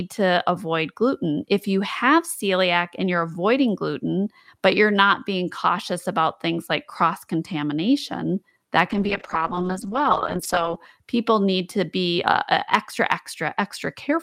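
A call bitrate drop from 8.92 to 10.87 s starves the encoder, consistent with roughly 48 falling to 9 kbps, so speech turns coarse, watery and muffled.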